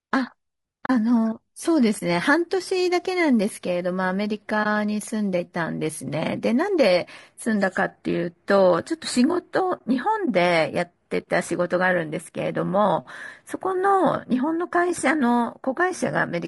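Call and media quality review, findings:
Rough, grainy speech texture throughout, noise filling between harmonics, top band sounding thin and synthetic. Likely low-delay AAC compression (AAC-ELD-style short frames), damage plainly audible, consistent with a low rate around 32 kbps. Short frames resolve pitch poorly, hence grain tied to voiced sound. Unlike background hiss, it rides the speech and vanishes in pauses.

AAC frame loss with muting at 0.85–0.90 s: 40 ms soft-edged gap, consistent with two consecutive lost frames zeroed by the decoder. The overlap window fades out and back in.

Same at 4.63–4.66 s, 20 ms gap, one frame's worth. Same at 10.25–10.28 s, 20 ms.

The soft edges of the three gaps separate these from hard-edged sample dropouts or buffer underruns.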